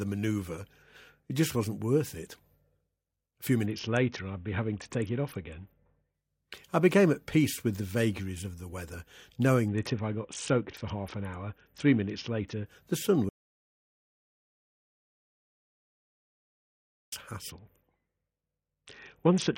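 From 3.66 to 6.14 s the speech turns dull and gritty, its treble gone: a Bluetooth SBC bit pool drop, consistent with the link falling from a bit pool near 28 to about 6, roughly 60 kbps. The same dulled, grainy sound returns from 9.68 to 12.66 s. Then from 13.29 to 17.12 s the audio cuts to total silence for about 3.8 s, with no room tone left. This audio dropout to silence likely comes from a lost input while the recorder kept writing silence. From 17.50 s to the end the starved, gritty bit pool sound comes back.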